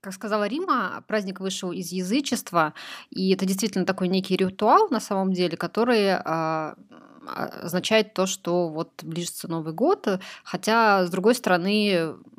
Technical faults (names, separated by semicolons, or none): none